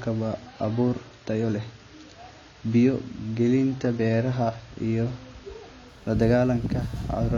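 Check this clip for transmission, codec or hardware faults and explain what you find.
One fault is present. From 0.0 to 5.88 s, an adaptive stream starting at a low bitrate lacks everything above 7 kHz and carries stronger coding artefacts, consistent with a 24 kbit/s AAC encoding, before stepping abruptly and gaplessly up to a stream nearer 96 kbit/s.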